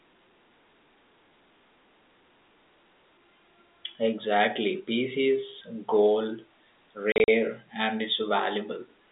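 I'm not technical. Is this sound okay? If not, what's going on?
No. From 7.12 to 7.28 s there is packet loss filled with silence. Small gaps totalling 100 ms chop the speech. The telephone sound comes from normal G.711 phone coding.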